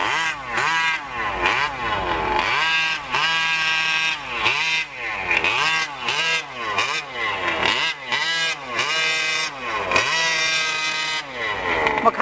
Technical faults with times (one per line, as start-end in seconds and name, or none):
none